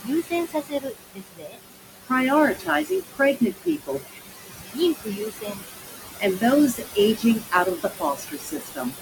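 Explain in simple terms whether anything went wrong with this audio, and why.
Something did go wrong. A noise suppressor is running through the whole clip, and it leaves noise suppressor artifacts. The room noise sits only a little below the speech. The suppressor pushes that noise down hard between words. Then the noise comes back up under the speech.

There is also speech cut by the noise suppressor. The filter mistook parts of the voice for noise and turned them down too. This happens from 0.03 to 1.61 s, from 2.54 to 4.19 s, from 4.73 to 5.65 s, and from 6.18 to 8.97 s. Within each stretch, the quieter sounds fade away, such as soft consonants and word endings. They add up to about a second in the first stretch, under a second in the middle two, and about a second and a half in the last. Those bits sound swallowed or faint.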